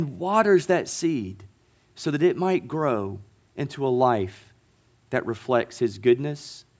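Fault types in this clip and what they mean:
Nothing to list here, since the speech comes across without any technical faults worth flagging.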